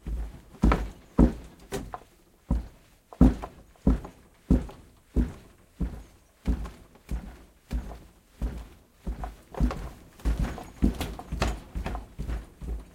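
Nothing in this recording of everyday sounds comes across as a technical fault, so there's nothing here to flag.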